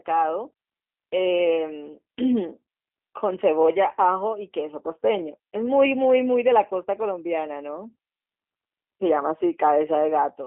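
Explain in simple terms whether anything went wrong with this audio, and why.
The speech passed through a G.729 codec, a phone-call squeezer that rebuilds a voice from a simple model of the throat, its pitch and a few pulses. From start to finish, that leaves the speech thin, boxy, slightly rough and robotic, with nothing kept below about 250 Hz or above 3.4 kHz.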